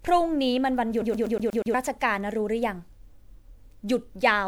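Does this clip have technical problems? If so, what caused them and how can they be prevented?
Yes. Generation loss runs through the whole clip: the speech sounds swirly, hollow and smeared, with blurred attacks. The likely cause is repeated lossy re-encoding, around seven passes, which fits MP3 at about 128 kbit/s, each pass quantising again on a shifted frame grid so noise and spectral gaps accumulate. To prevent it, keep a lossless master and encode to a lossy format only once, at the end.

A CD stuck on one turn is audible from 1.02 to 1.74 s: a 121 ms slice of speech repeats six times, with a brief mute at each jump, as a scratch keeps throwing the laser back to the same spot on every rotation. To prevent it, clean or replace the disc and rip it with an error-checking ripper.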